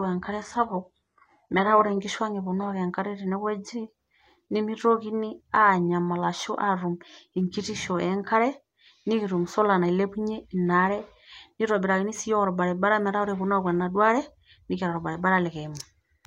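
For the first 2.0 seconds the speech is coming through an adaptive stream starting at a low bitrate: the player grabbed a thin version to get going fast, then switched up once it trusted the connection. Until then the top end sounds synthetic, with stronger codec artefacts, which fits HE-AAC at around 12 kbit/s. At 2.0 s it jumps cleanly, with no gap, to something like AAC-LC at 96 kbit/s, with content reaching up to about 15 kHz.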